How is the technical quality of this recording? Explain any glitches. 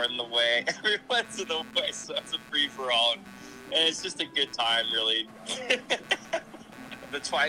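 The recording has one persistent fault. Computer activity noise runs throughout: the computer's load changes shift the shared audio ground, adding a buzzing pulse around 150 Hz, roughly 25 dB below the signal.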